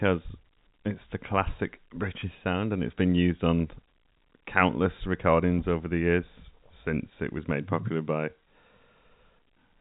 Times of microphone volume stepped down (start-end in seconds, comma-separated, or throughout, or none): none